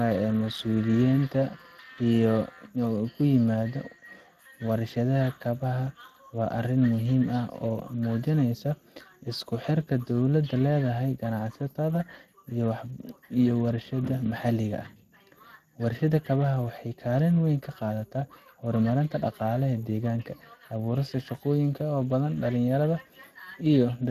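Speex codec damage runs through the whole speech clip, from 0 s to the end. This CELP coder rebuilds each short stretch of speech from a predicted envelope plus a coded excitation. At a rate that fits roughly 22 kbps, that excitation is thinly described, so the voice sounds plainly grainy and hoarse. The upper band reads as shaped noise rather than detail, and nothing is present above 15.3 kHz.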